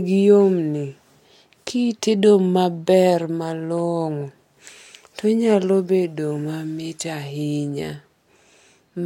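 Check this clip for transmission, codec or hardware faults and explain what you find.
Listening through this speech recording, I find no faults to report. There is nothing here that calls for an explanation.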